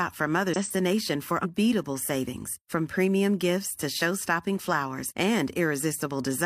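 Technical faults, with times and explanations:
0.51–0.57 s and 1.40–1.45 s, damaged data in a compressed stream: corrupted bytes made the decoder misread frames and lose sync until it found the next valid header, so each spot gives a brief glitch of about 60 ms, the second just before "savings from".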